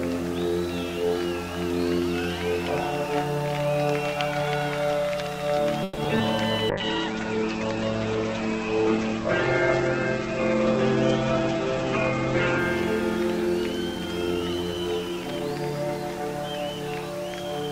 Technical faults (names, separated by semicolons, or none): call audio freeze; short concealed packet loss; call bitrate drop; jitter buffer speed-up